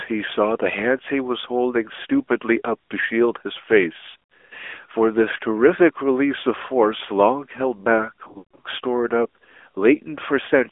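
From the start the speech passes through an AMR narrowband mobile codec. The band is held to roughly 300 Hz to 3.5 kHz, and the voice has a plainly audible buzzy, synthetic edge, consistent with a 10.2 kbps AMR-NB mode. A spectrogram shows a hard, empty ceiling above 3.5 kHz and smeared harmonics below it.

Between 4.10 and 4.53 s, lost AMR speech frames break up the voice. About 200 ms of dropouts are spread over 400 ms, the longest gap lasting 60 ms, as the decoder repeats its last pitch and tract settings with falling gain. This gives short dips and warbles, visible as brief amplitude notches with stretched, blurred harmonics. From 8.28 to 8.66 s a worse cluster loses 240 ms within 360 ms. It includes a 160 ms run in which the sound drags out and fades almost to silence before returning rough. The waveform shows a decaying envelope there, and the spectrogram shows frozen harmonics that thin away.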